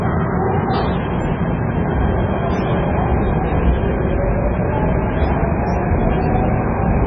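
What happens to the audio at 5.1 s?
At 5.1 s, as throughout, the audio stops at 7.2 kHz and sounds watery and swirly, likely from heavy MP3 compression starving bits so weak components flicker.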